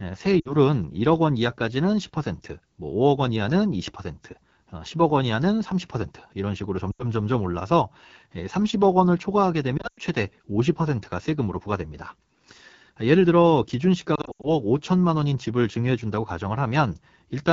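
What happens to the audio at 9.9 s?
Lost AMR speech frames hit the sound from 9.77 to 9.99 s. Radio errors corrupted several speech frames, and the decoder filled each gap by repeating the last good pitch and vocal tract settings at falling gain. The losses total about 140 ms, spread over 200 ms. That fits roughly seven 20 ms frames. The longest unbroken run lasts 100 ms. There the speech drops quickly to near silence, since wideband concealment decays fast. It returns thin and rough.

Throughout, including this moment, the speech also carries AMR wideband (HD Voice) codec damage that is plainly audible. The codec models the vocal tract with pulse excitation up to 6.4 kHz. It fills the band from 6.4 to 7 kHz with shaped noise. The roughness and rasp suggest a very low rate, consistent with about 8.85 kbit/s.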